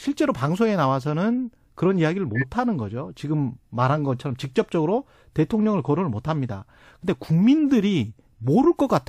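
At 1.01 to 1.04 s there is a corrupt frame decoded. Flipped bits in a single compressed frame reached the decoder, which played it anyway. Misread gains and codes put energy at the wrong frequencies. The result is a short blip, peaking around -30 dBFS. At 2.35 to 2.44 s another damaged frame comes through. This one is louder, near -15 dBFS. It sounds like a squeak or burst of noise over the speech.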